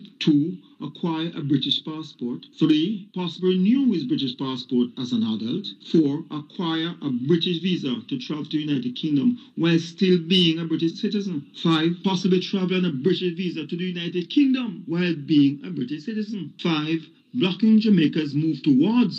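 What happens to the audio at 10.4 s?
Nothing goes wrong at 10.4 s; the audio plays through that moment intact, with no dropout, click or distortion.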